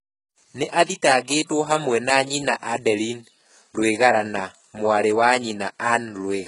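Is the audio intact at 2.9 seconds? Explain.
No. Likely HE-AAC compression runs throughout, including 2.9 s: treble is rebuilt from copied lower bands, leaving gritty, lispy s sounds, nothing above 11.1 kHz, and heavy damage fitting a very low bitrate.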